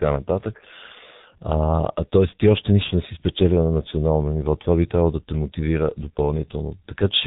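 Throughout, the speech sounds muffled and hoarse, with smeared consonants and nothing above 3.8 kHz, the heavy damage of a G.723.1 codec running at low bitrate, which fits about 6.3 kbit/s.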